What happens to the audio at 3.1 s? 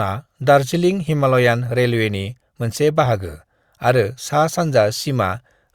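At 3.06 s the speech has an overlap between stream segments. Two adjacent segments, which here appear to be about 1 s long, carry time stamps that overlap. The player trims the overlapping stretch even though that audio was never duplicated, so about 5 ms of real signal is dropped and the waveform jumps straight from one sample value to an unrelated one. It sounds like a brief click or tiny skip. A waveform view shows a sudden step discontinuity, and a spectrogram shows a thin vertical broadband line at that instant.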